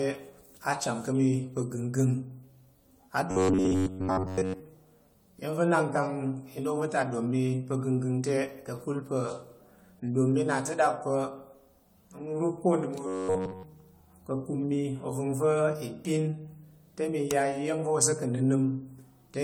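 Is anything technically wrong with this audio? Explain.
Yes. Throughout, the audio was likely decoded and re-encoded about five times with a lossy codec, fitting AAC-LC at 96 kbit/s. This generation loss leaves the speech swirly, hollow and smeared, with blurred attacks.

From 3.31 to 4.60 s and from 13.07 to 13.63 s, new audio likely arrived too seldom, so an 11 ms buffer was replayed in place of most, then all, of the real sound. This robotic sound from repeated short buffers is a rigid, metallic 93.8 Hz buzz.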